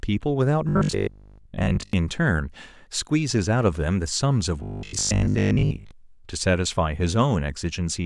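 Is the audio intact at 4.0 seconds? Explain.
Yes, the speech at 4.0 seconds plays through intact, with no audible fault at that moment.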